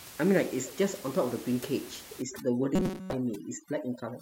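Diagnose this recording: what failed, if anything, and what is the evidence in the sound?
Overdone noise removal begins at 2.22 s and runs to the end. The stage is call processing. The room noise, about 17 dB under the speech before that point, drops and breaks up into twinkling specks. Bands near the noise estimate are cut, so quiet speech detail goes too.

From 2.75 to 3.13 s the sound turns into a rigid metallic buzz at 188 Hz. This is robotic sound from repeated short buffers, likely at the driver or buffer stage. A chunk of about 5.3 ms keeps replaying while most of the new audio is skipped.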